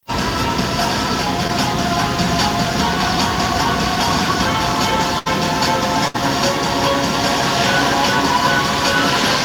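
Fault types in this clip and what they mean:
Short concealed packet loss: At 1.47 s, a small piece of the stream arrived too late to decode. The receiver covered the hole by extending the sound just before it. It then blended back into the real signal. About 12 ms of filler stands in for roughly 20 ms of missing audio. The whole event spans about 30 ms. It passes as a brief smear or wobble, and a very short sound in that spot could disappear.
Burst of packet loss: At 5.19 s and again at 6.08 s, a longer run of data failed to arrive in time. Each time, the receiver kept the preceding sound going and faded it down as the gap lengthened. The first fill lasts about 71 ms and the second about 64 ms. Playback then resumes further along. About 60 ms of real audio is skipped at each point, leaving a jump after a held, dying tail.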